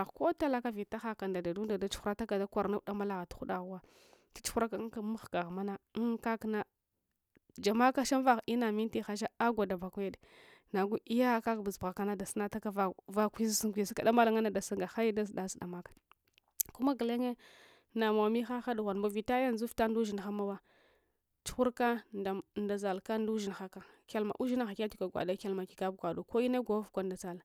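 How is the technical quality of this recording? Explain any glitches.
Technical quality is sound: no glitches or faults are audible at any point in the speech.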